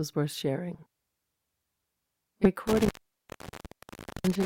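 From 0.74 to 0.85 s, the speech garbles briefly. Frames arrived out of order: two neighbouring blocks of about 40 ms each played swapped. This gives a fluttery jumble. At 2.42 to 2.48 s, the same fault recurs with shorter blocks of about 20 ms.

At 2.67 s an intermittent contact begins. A loose connection opens, and the speech drops out with crackle at the break. For about 1.36 s only faint hiss remains. The fault ends at 4.45 s.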